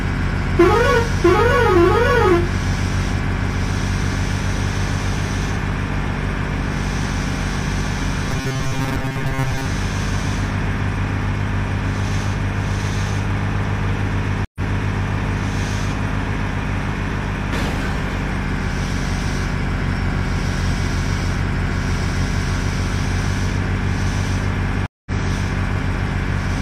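From 8.31 to 9.66 s, the sound turns into a rigid metallic buzz at 133 Hz. This is robotic sound from repeated short buffers. It likely comes from a roughly 7.5 ms buffer being looped through most of that stretch. At 14.45 s a stream reconnect cuts in with 106 ms of silence. The audio then resumes 464 ms earlier, replaying material. A second reconnect at 24.86 s leaves 198 ms of silence and resumes about 150 ms later, skipping ahead.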